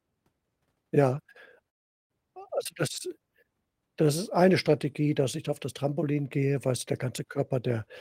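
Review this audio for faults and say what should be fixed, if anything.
Packets likely stalled and the jitter buffer emptied: a call audio freeze, 1.69 to 2.12 s, nearly silent, resuming at "also das" with nothing lost. Fix with a deeper adaptive jitter buffer and a steadier network path, so delays like this are absorbed.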